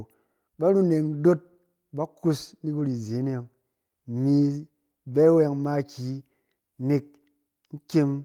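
At 2.79 s, after "kus na", a lost packet rebuilt from error correction leaves 20 ms of rougher, noisier sound with no gap, seen as a brief grainy smear on a spectrogram.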